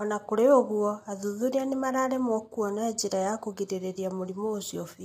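A speech clip with low-delay AAC compression damage plainly audible throughout: the sound turns rough and grainy, likely from AAC-ELD at a rate near 32 kbps. A spectrogram would show noise filling between harmonic lines and a thinned, synthetic-looking top band.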